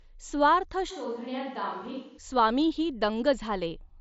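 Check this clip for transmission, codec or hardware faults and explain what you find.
One fault is audible: a switch to a distant microphone. The band stops near 7.7 kHz throughout, with light graininess on louder sounds, which matches the mSBC Bluetooth headset codec at its normal limit.

From 0.92 s to 2.17 s the speech abruptly turns hollow and roomy and loses bass. It drops about 5 dB and carries faint room noise, far below the speech. It then snaps back. The likely cause is the close microphone's signal failing, so the sound came from a pickup farther away.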